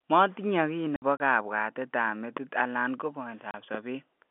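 Between 0.96 and 1.2 s the speech is chopped by hard-edged holes, about 90 ms in total with the longest run 60 ms. A single 30 ms gap follows "alan ko" at 3.51–3.54 s. This is packet loss filled with silence: the receiver played nothing where packets went missing, and the gap lengths fit 30 ms packets.

A sharp loud pop lands at 2.37–2.39 s, just before "alan ko", and another at 3.75–3.77 s. Each sits about 10 dB above the speech, which carries on underneath. The likely cause is a sudden voltage step from a switch, static or driver glitch, shaped by the downstream circuitry, all heard through the narrow 250–3500 Hz telephone band of the G.711 line.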